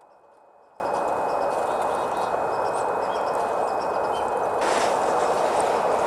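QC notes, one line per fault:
0.0 to 0.8 s, one channel inverted: the sound drops by about 30 dB, most likely because one stereo channel has its polarity flipped, so combining left and right subtracts the material they share instead of adding it. Centred content and low end cancel almost completely, leaving only the slight difference between the channels, which comes through as a faint residue until the fault ends at 0.8 s.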